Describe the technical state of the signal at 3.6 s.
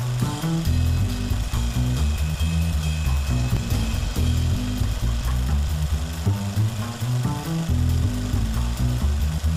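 Right around 3.57 s there's an overlap between stream segments. Two neighbouring chunks of the stream claimed the same stretch of time, and the player trimmed the duplicate. But that audio wasn't actually doubled, so roughly 15 ms of real sound just disappears. The waveform jumps across the gap, and you hear a tiny skip. The boundary's position fits segments about one second long.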